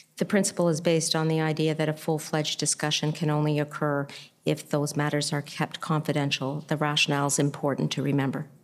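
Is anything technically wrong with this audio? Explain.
No, no technical faults here.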